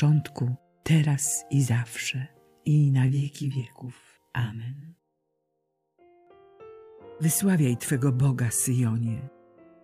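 From 3.08 to 6.27 s, channel delay (comb filtering) sets in. One channel trails the other by roughly 20 ms, and summing them cancels evenly spaced frequencies from around 20 Hz upward, leaving a rough, slightly doubled sound. Unlike flanging, these notches hold still rather than sweeping.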